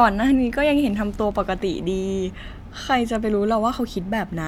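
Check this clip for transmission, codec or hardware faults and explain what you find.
Nothing in this speech clip points to any fault.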